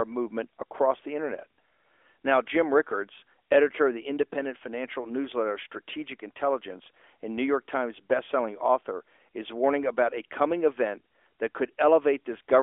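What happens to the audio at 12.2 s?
Nothing goes wrong at 12.2 s: the speech carries on intact through that moment, still in the narrow telephone band of the AMR narrowband mobile codec it travels through.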